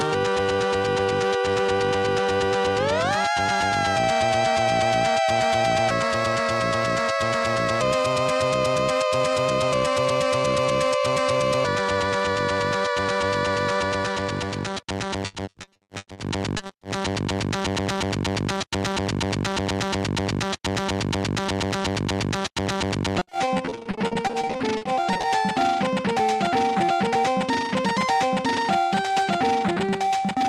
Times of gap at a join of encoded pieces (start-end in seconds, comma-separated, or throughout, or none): none